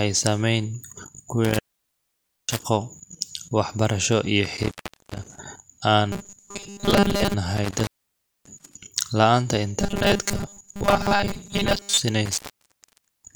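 Intermittent contact first appears from 1.45 to 2.63 s and again from 4.45 to 5.38 s. A loose connection breaks the signal path, and the speech drops out for about 0.9 s and then 0.41 s, with crackle as the contact opens and recloses. Faint hiss fills each gap. Unlike a software dropout, the crackling edges and the residual noise floor point to a physical connection failing.

From 6.12 to 7.34 s the speech turns into robotic sound from repeated short buffers. It becomes a rigid, metallic buzz at 200 Hz that still roughly tracks the syllables, and most of the real audio within the span is lost. The buzz fits a 5 ms slice being replayed, likely because new audio arrived too seldom. The sound continues here instead of going silent, which separates it from the contact breaks.

Intermittent contact returns from 7.57 to 8.75 s, with the signal open for about 0.59 s. The same robotic buzz comes back from 9.80 to 12.00 s, over its longest stretch. 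A final contact break runs from 12.26 to 13.35 s, with the signal open for about 0.88 s, again edged with crackle and leaving hiss.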